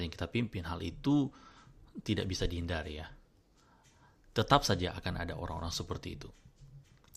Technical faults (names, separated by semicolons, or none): none